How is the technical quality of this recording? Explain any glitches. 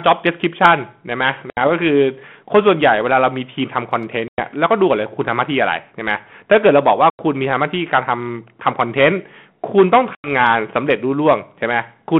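The recording has two faults: constant hard clipping and four short dropouts from packet loss on the ADPCM call, all over a narrow telephone band of about 150 Hz to 3.4 kHz.

Hard clipping runs throughout. The speech is driven about 12 dB past the clipping point, so only a small share of samples hit the clip level, but their flattened peaks add harsh crackle on loud syllables.

Packet loss on an ADPCM call occurs at 1.5 s (70 ms lost), 4.28 s (100 ms), 7.1 s (90 ms) and 10.15 s (90 ms). Each gap is a hard-edged silence. Afterward the decoder's predictor and step size are out of step with the sender's, so speech returns slightly distorted before settling.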